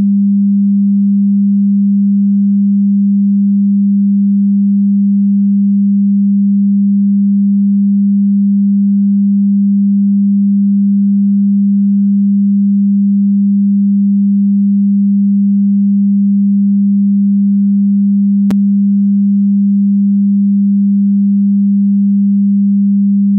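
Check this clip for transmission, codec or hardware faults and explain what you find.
One fault: a block of digital silence at 18.51 s. For about 5.8 ms the sound drops to silence and then returns with no fade, a span that fits a 256-sample block the program likely failed to fill in time. Both edges are hard cuts, and the gap is so short that it registers as a single tick rather than an audible hole. Unlike a lone click from a corrupted sample, it contains a measurable stretch of dead silence.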